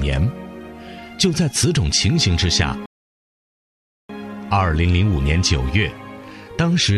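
At 2.86 s the sound cuts to silence. This is a rebuffering stall. The player ran dry of downloaded audio and waited for more. Playback returns at 4.09 s, exactly where it stopped. Nothing is skipped, but about 1.24 s of dead air is added.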